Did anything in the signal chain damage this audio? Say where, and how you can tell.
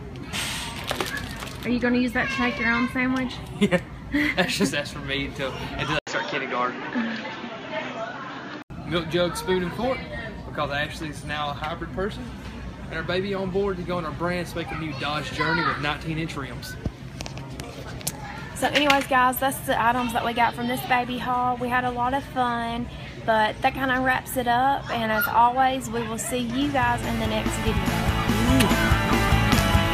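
Yes: the input likely switched to a poorer device from 5.99 to 8.70 s, leaving an 80 ms gap, nothing above 7.1 kHz, new noise and a level jump.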